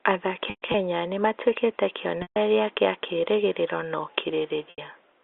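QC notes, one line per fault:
0.50–0.74 s, packet loss with pitch repetition: about 160 ms of gaps scattered over 240 ms, with the longest run at 120 ms, ahead of "nĩ matuĩkĩte". The receiver repeats the last pitch period, so the sound holds with a buzzy tone and briefly fades before the cross-fade back.
2.22–2.36 s, packet loss with pitch repetition: 140 ms lost between "nĩ matuĩkĩte" and "kĩa kĩĩrĩgĩrĩro na". The repeated cycle fades toward silence. The sizes of the gaps fit 20 ms packets on the 64 kbps G.711 mu-law line.
4.70–4.78 s, packet loss with pitch repetition: 80 ms lost, long enough that the repeated period fades out before the speech returns with a short cross-fade.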